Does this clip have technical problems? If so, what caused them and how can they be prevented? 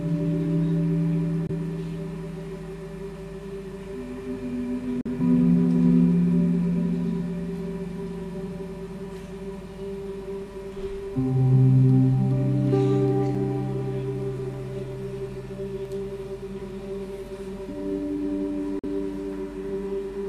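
Yes. The audio has two kinds of fault.

At 1.47 to 1.51 s, 5.01 to 5.07 s and 18.79 to 18.85 s the sound drops out completely for about 21 ms, 43 ms and 43 ms. It then resumes further along, as though it had kept playing through the gap. This is likely a Bluetooth dropout. The wireless link failed to deliver audio packets to the headphones in time, and the late ones were discarded. The lengths fit one lost frame of about 21 ms, then two. Keeping the headphones close to the source with a clear line of sight, and away from busy 2.4 GHz traffic, prevents this.

At 13.35 s and 15.85 s there are brief hard cuts to digital silence, lasting 5.33 ms and 1.33 ms. Each is heard as a click or tick, because the waveform jumps to zero and back with no fade. These are blocks of digital silence: most likely the program failed to fill the output buffer in time, so zeros went out instead. The lengths fit blocks of 256 and 64 samples. 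Larger buffers and less competing processing load give the audio thread time to deliver each block, which prevents these gaps.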